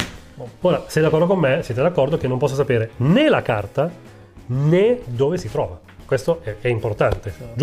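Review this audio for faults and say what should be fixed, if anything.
Nothing stood out on listening, so there is nothing here that needs fixing.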